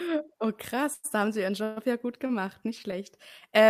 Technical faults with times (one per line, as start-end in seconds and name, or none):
0.93-1.06 call audio freeze
1.64-1.78 call audio freeze
2.26-2.31 short stall from a late packet